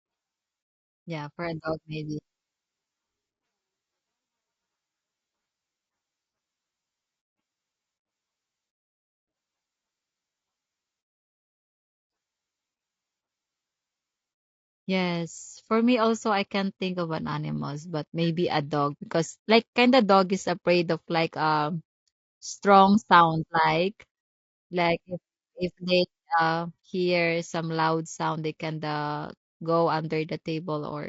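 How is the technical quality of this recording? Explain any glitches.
Quality takes a hit from plainly audible codec damage running the whole way through. It's low-delay AAC compression, likely AAC-ELD, and the grain fits a rate around 32 kbps. At that low bitrate it can't code the voice's harmonics cleanly, so the speech comes out rough and grainy, with noise filling the gaps between harmonics.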